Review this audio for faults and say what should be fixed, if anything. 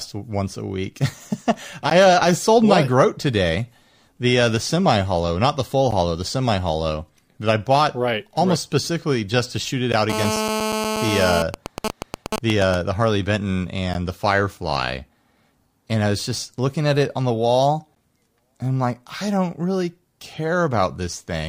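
Gap between chunks: hard-edged holes of about 13 ms at 1.90, 5.91 (after "hollow not the full"), 9.92 (after "just to shoot it"), 13.94 and 17.95 s. The spacing of exactly 4.0 s points to silence inserted at each chunk join. Unlike a dropout, nothing is missing, and the timing never varies. To prevent this, remove the codec padding or make the player queue chunks gaplessly.

GSM phone buzz: from 10.10 to 11.42 s, just after "to shoot it out", a raspy 217 Hz buzz rich in harmonics sits about 3 dB below the speech. It is a phone on a call whose transmit bursts are being rectified by the audio circuit. Mains hum would be a smoother 50 or 60 Hz tone, and this buzz is steady rather than broken into groups. To prevent this, keep phones away from the gear or switch them to airplane mode.

GSM signalling bursts: from 11.42 to 12.75 s, the steady buzz turns into even ticks with a longer 217 Hz buzz twice a second, at roughly the same level as the speech. 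This is the same phone, still on its call, sending only sparse bursts while its user is silent. The grouped rhythm is what distinguishes it from the continuous buzz. The same fix applies: keep the phone well away, or shield and filter the inputs.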